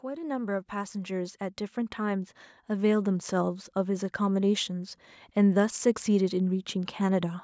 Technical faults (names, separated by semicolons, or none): automatic gain rising